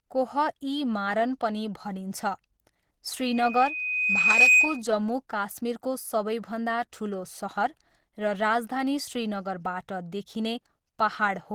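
The artefacts of an earlier low-bitrate encoding run through all of this speech recording, even though the file is a high-bitrate MP3 with nothing above about 20.2 kHz. The likely cause is low-bitrate audio saved at a high bitrate. The damage sounds like a low-rate codec such as Opus at around 16 kbit/s, and re-encoding cannot restore what that first pass discarded. From 3.21 s to 4.82 s, just before "जम्मू काश्मीरको", a single 2.5 kHz tone swells over roughly 1.5 s into a piercing whistle about 10 dB above the speech. This is a loudspeaker feedback squeal: the microphone was picking up its own loudspeaker, and the loop gain at that frequency rose above one.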